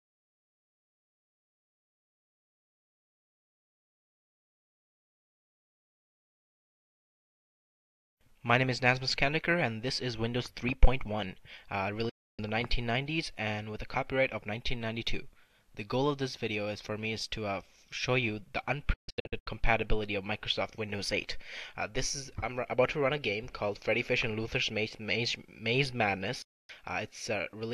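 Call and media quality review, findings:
Digital broadcast dropout, three mutes: 12.09–12.39 s, 18.93–19.47 s (broken into several short holes, longest about 144 ms), 26.42–26.70 s. Quick 8 ms fade to silence each time. Receiver lost lock or failed frame checks and muted until clean frames resumed. Audio in the gaps is gone.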